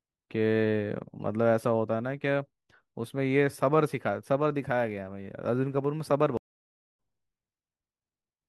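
At 6.37 s the speech just drops out for about 0.57 s, and when it comes back at 6.95 s it's picked up a bit further along, skipping somewhere under half a second of what was said. That's a stream reconnect: the connection broke, the player went quiet, reconnected and spun up a fresh decoder mid-stream. Since it resumes later rather than repeating anything, it behaves like a live feed that simply moved on while the player was away.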